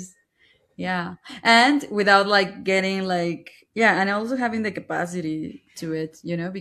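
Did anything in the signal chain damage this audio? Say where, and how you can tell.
No, nothing in the chain damaged this recording.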